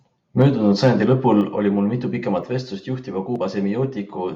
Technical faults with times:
0.40-1.37 microphone overload
0.42 microphone volume stepped down
1.41 microphone volume stepped down

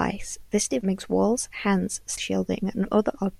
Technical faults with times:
0.81 compressed frames skipped
2.17 compressed frames skipped

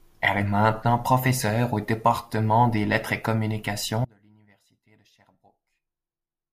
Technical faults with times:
4.05-6.52 audio dropout to a faint residue

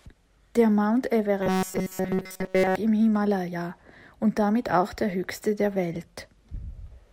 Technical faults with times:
1.43-2.75 robotic sound from repeated short buffers

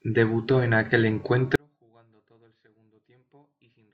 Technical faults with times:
1.55-3.93 audio dropout to a faint residue

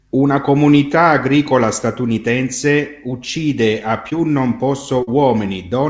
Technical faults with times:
4.10-4.13 short concealed packet loss
5.03-5.09 short concealed packet loss

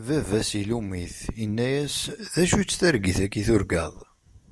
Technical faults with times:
none

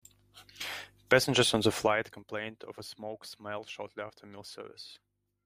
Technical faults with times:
1.67-2.23 zipper noise

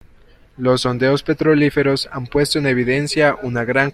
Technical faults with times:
none

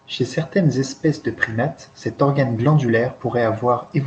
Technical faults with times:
none

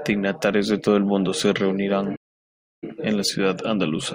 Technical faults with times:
2.15-2.84 playback stall

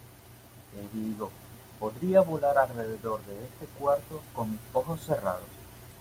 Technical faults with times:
none

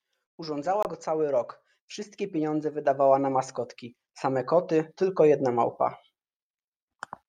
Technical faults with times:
0.83-0.89 Bluetooth stall

